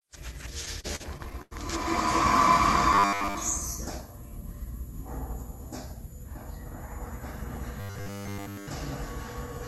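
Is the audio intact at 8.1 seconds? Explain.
No. At 8.1 seconds the sound falls inside a stretch of robotic sound from repeated short buffers, running from 7.80 to 8.67 s. Throughout that span it becomes a rigid, metallic buzz at 100 Hz, with essentially none of the real material coming through. The likely cause is that fresh audio stopped arriving in time, so playback kept looping the last fragment. A 10 ms loop would impose exactly that 100 Hz pitch.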